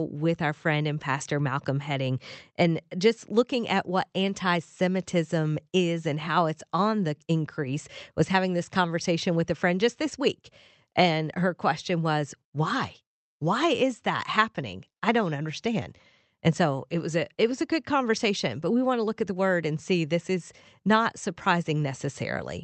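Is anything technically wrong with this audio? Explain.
No, nothing in the signal shows a technical fault; the recording holds together as a continuous, intact stream from beginning to end.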